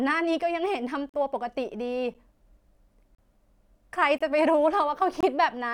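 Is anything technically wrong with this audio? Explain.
Yes. Gaps between stream segments interrupt the speech at 1.09–1.14 s, 2.14 s, 3.15–3.18 s, 4.18–4.21 s and 5.21–5.23 s, roughly once per second. These hard-edged silences of 10 to 45 ms come from mismatched timestamps between 1-second segments that the player pads with silence, so no audio is lost.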